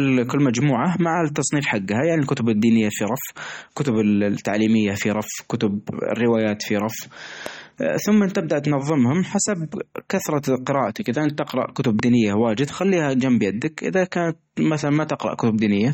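Throughout the speech, the sound is watery and swirling, with smeared consonant attacks and nothing above 16.6 kHz. This is MP3 compression at a starved bitrate, which fits about 32 kbps. The damage is plainly audible. Unlike a simple low-pass filter, weak frequency lines flicker on and off between frames.

From 7.46 to 7.49 s, a single loud pop jumps about 10 dB above the speech, which carries on beneath it. A second pop follows from 11.99 to 12.02 s, about 15 dB above the speech. Each is likely a voltage spike from a plug, switch or static discharge. Unlike a dropout or a click from a cut in the audio, nothing goes missing.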